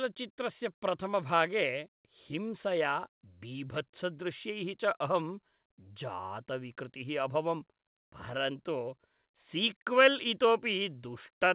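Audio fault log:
No faults heard in this speech recording.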